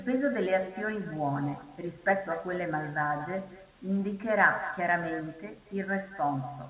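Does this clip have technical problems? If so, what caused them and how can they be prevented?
Yes. Throughout the speech, each phrase is shadowed by a quieter copy arriving about a fifth of a second later and sitting about 14 dB below the original: echo with no canceller. The far end played the call through a loudspeaker, its microphone picked that up, and nothing subtracted it before it was sent back. Unlike room reverberation, which smears smoothly off the end of each sound, this is a distinct, delayed repeat that sounds like a second, thinner version of the speech. The narrow bandwidth, topping out around 4 kHz as expected from a telephone-band codec, is normal for this call path. To prevent the echo, enable acoustic echo cancellation on the far-end device or have that participant use headphones instead of a loudspeaker.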